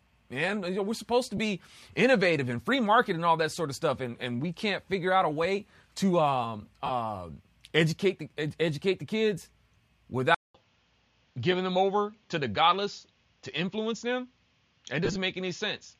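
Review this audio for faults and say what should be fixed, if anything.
Brief noisy smears at 1.37–1.39 s, 6.86–6.91 s and 15.05–15.16 s come from lost LE Audio frames. The LC3 decoder filled 15 ms, 37.5 ms and 67.5 ms gaps with the last spectrum, random-signed and fading. To prevent this, keep the Bluetooth link strong and uncongested, or raise retransmission margins.

From 10.35 s to the end the sound turns duller, with nothing above 7.2 kHz, a 200 ms silence at the change and a faint new noise floor about 45 dB down. The input likely switched to a poorer device. To prevent this, lock the recording input so the system cannot switch devices mid-session.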